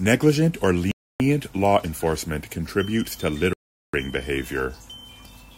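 This speech clip twice drops to dead silence and then resumes. The first gap runs from 0.91 to 1.2 s, about 0.29 s, and the audio picks up at "law enforcement contributes to". The second, from 3.53 to 3.94 s, lasts about 0.4 s and falls right after "law enforcement contributes to". The likely cause is a Bluetooth stall: radio interference delayed packets, the headphones' buffer emptied, and playback paused until the resent data arrived.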